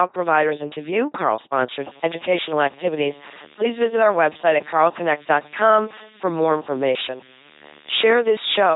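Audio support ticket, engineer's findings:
Buzzy, mechanical robot voice throughout, with stray buzz or hiss where voicing flips wrongly; nothing above 3.9 kHz. LPC-10 vocoder, heavy damage, consistent with a 2.4 kbit/s stream: ten-pole filter excited by pulses or noise, each frame forced fully voiced or unvoiced.

Steady low buzz with hash above it from 1.76 s to the end at 8.76 s, roughly 20 dB under the speech. Video or display buzz at a 75 Hz field rate: screen or video cable coupling into the audio path.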